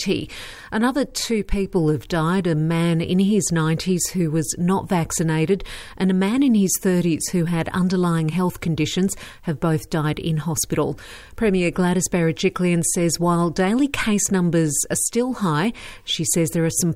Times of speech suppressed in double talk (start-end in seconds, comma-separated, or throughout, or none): none